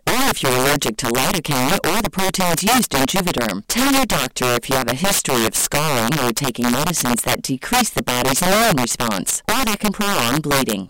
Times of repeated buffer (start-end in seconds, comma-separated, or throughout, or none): none